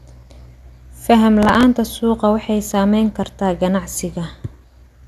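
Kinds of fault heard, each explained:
Processor overload crackle: From 1.43 to 1.63 s a gritty, tearing crackle sits on top of the speech, then stops. The processing could not keep up with its deadlines, so a run of several buffers, each only a few milliseconds long, went out late. Every missed buffer was filled with a replay of stale audio with hard edges at both ends, and that rapid string of discontinuities is heard as the crackle.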